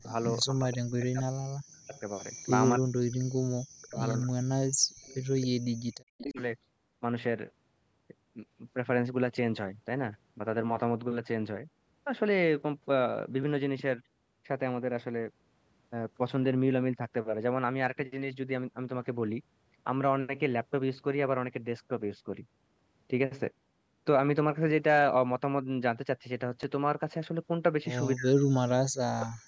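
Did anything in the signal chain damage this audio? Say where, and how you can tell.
Yes. Speech is pumped down in chunks from 0 to 4.99 s, briefly at 6.23–6.39 s, and again at 28.16–29.37 s, with drops as deep as about 40 dB. The cause is likely speech suppressed in double talk by call processing. The level dips or cuts out in pieces.

A faint delayed copy, 269 ms behind, appears at 0.22–0.39 s and 1.94–2.67 s at about −20 dB, and at 4.19–6.43 s at about −15 dB. It is likely echo leak from the loudspeaker side's canceller. It is a lagging duplicate, not a stutter.

At 13.43 s and 26.63 s there is a tiny click. This is a repeated buffer at the driver stage: an 8 ms piece plays twice, which fits a 128-sample buffer. It is too short to hear as an echo.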